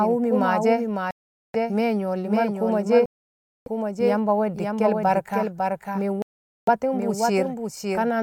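Right from the start, and all the way through, the speech has a second copy of itself trailing along about half a second behind, a bit quieter, maybe around 5 dB down. It's a doubled audio track: same full-band sound, no reverb tail or room colour on it, so it reads as a clean echo rather than a space. Most likely the signal got picked up twice, once through a slower path, or an edit left two copies out of step.

Then there are three dropouts. At 1.11 s the sound cuts to silence for about 434 ms, comes back at 1.56 s, and carries on from where it stopped. The same thing happens at 3.06 s, a longer gap of about 606 ms ending at 3.68 s, and again at 6.22 s for about 452 ms, resuming at 6.69 s. These are Bluetooth stalls, likely the headphones' buffer running dry when interference held up packets, so playback just sat there until the resent data arrived.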